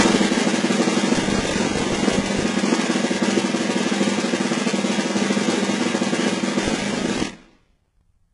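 Throughout the music, the treble sounds gritty and metallic, cut off above 11 kHz, heavy damage likely from HE-AAC compression at a very low bitrate, around 12 kbps, rebuilding highs from copied lower bands. From 1.14 to 2.43 s and again from 6.63 to 8.02 s, a tearing crackle rides on the sound: processor overload crackle, with dozens of roughly 10 ms buffers missing deadlines and replaying stale audio.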